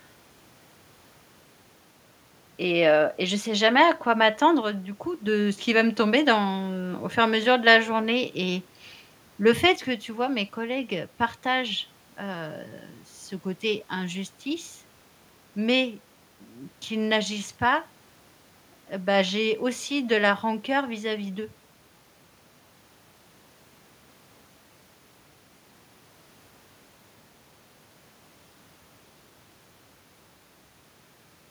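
At 4.61 s, after "sais jamais à quoi", the speech level falls abruptly by about 6 dB until 5.27 s, recovering before "ce qu'il va me". The same step returns at 9.76 s after "le fait" and lasts to the end. This is likely one channel dropping out before a mono sum, leaving half the shared signal. The waveform shows a sudden envelope drop, and the spectrogram a uniform darkening across all frequencies.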